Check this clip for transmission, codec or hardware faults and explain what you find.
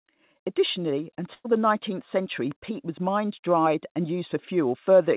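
Two packet-loss faults occur in the speech, both on a call path whose band stops at 4 kHz, consistent with G.711 mu-law at 64 kbps.

At 1.34 to 1.47 s, a burst of packet loss: roughly 100 ms of consecutive packets never arrived, so the receiver stretched the last sound for about 100 ms, fading it, with about 30 ms of silence. The result is a held, dying buzz or hiss, then speech resumes with that stretch gone.

At 3.94 to 3.97 s, a short concealed packet loss: about 20 ms failed to reach the decoder in time, and the receiver patched it by extrapolating the preceding sound for about 13 ms before blending back. This is heard as a brief smear or wobble in the speech.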